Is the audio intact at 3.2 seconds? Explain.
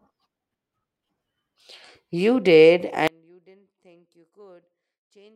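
No. At 3.2 seconds the speech is inside an audio dropout to a faint residue that begins abruptly at 3.08 s and runs to the end of the clip. The wanted signal has most likely been lost somewhere upstream while the path after the break stayed live, so instead of silence the gap carries only faint sound, roughly 30 dB below the normal level of the speech. The cut is sudden, unlike a natural pause or fade.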